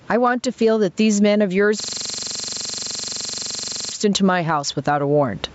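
Speech recording with two faults. Gain pumping runs through the whole clip. The gain swings by about 10 dB. Levels sound squashed together. The likely cause is gain set far too high, with a fast limiter pulling it back. A system hang loop starts at 1.80 s and lasts until 3.92 s. One 42.67 ms slice of audio repeats exactly, over and over. It loops at 23.4 Hz, 50 times. That loop length fits a 2048-sample buffer. The hardware kept replaying its ring buffer while the computer or driver was frozen.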